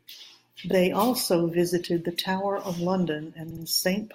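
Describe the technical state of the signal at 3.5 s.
At 3.5 s the speech stutters from repeated frames, running from 3.50 to 3.63 s. A 64 ms block of compressed audio is decoded twice more, adding 128 ms.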